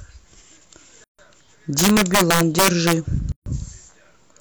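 A speech clip with two kinds of fault. There are gaps at joins of encoded pieces at 1.04 to 1.19 s and 3.32 to 3.46 s, each about 145 ms long. Separately encoded segments were joined untrimmed, so encoder delay and padding remain. Between 1.79 and 2.93 s, integer overflow produces violent cracks on loud peaks. Driven about 6 dB past the limit, samples wrap to the opposite sign instead of clipping.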